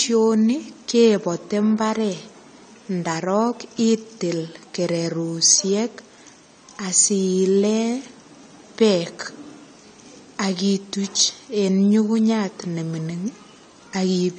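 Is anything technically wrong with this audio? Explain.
Yes. AAC compression runs throughout the speech: nothing reaches above 9 kHz, leaving it dull and smeared, with a fizzy, warbling edge on sibilants. This is likely from low-bitrate AAC-LC, which fits roughly 32 kbps, where coarse quantisation drops high bands and leaves spectral holes.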